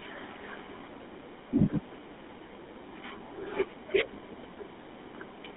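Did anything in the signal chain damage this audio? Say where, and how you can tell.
Yes: the codec stage. Throughout the speech there is the buzzy, gravelly roughness of the GSM full-rate codec, which fits a 13 kbps stream. It models the vocal tract and drives it with a coarse, regularly spaced pulse excitation. A spectrogram shows content confined to roughly 250 Hz to 3.6 kHz, with smeared, grainy harmonics.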